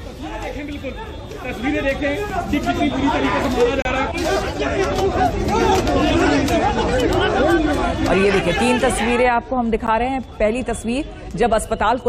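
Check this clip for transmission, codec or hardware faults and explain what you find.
Two short dropouts in the sound come from a gap between stream segments. At 3.82 to 3.85 s the sound stops dead for about 31 ms, and at 9.87 s a briefer hole of about 13 ms follows, roughly six seconds later, which fits 6-second segments. Adjacent segments' timestamps don't quite meet, so the player pads the difference with silence and nothing is lost. Each is heard as a tiny click-edged blink, a near-flat line in the waveform and a narrow, sharp-sided blank column across the spectrogram.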